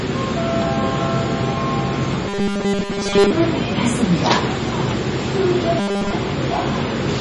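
MP3 compression runs through the whole clip. Nothing remains above 11.2 kHz, and weak frequency components flicker in and out from frame to frame, giving a watery, swirly texture and smeared attacks. The heavy damage likely comes from a low bitrate, consistent with about 32 kbps.

Robotic sound from repeated short buffers appears from 2.29 to 3.32 s and from 5.79 to 6.13 s. New audio likely arrived too seldom, so a tiny slice was looped, forcing a rigid, metallic 200 Hz buzz that fits a 5 ms repeat. The first stretch is repeated throughout, the second for most of its length.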